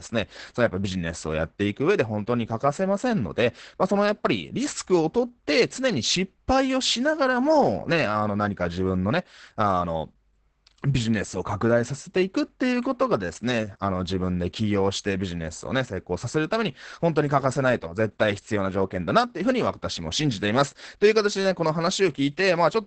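The speech is muffled, hoarse and faintly robotic throughout, with nothing above 8.7 kHz: heavy Opus voice compression, SILK coding at what sounds like 10 kbps.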